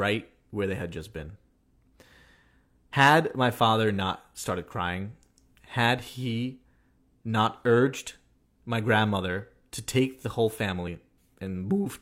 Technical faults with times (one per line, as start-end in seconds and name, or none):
2.93 overlap between stream segments
10.88-10.90 overlap between stream segments